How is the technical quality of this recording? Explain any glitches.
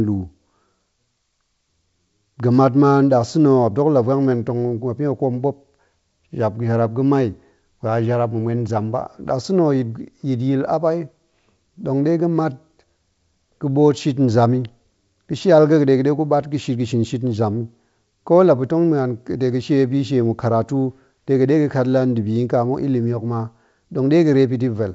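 Nothing stood out on listening: the speech comes across as ordinary G.722 wideband telephone audio, with no glitches to explain.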